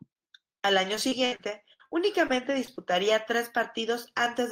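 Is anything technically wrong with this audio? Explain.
Yes, there's repeated packet loss (robotic sound) from 0.95 to 2.79 s: nine short dropouts, up to 64 ms, get patched by stretching the previous sound, so the speech turns choppy and robotic.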